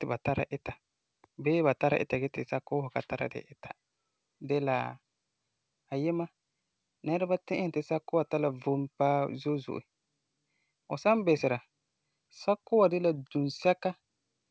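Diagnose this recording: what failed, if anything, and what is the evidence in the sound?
Nothing stood out on listening; the speech simply carries the expected sound of a G.722 call path, with nothing above 8 kHz.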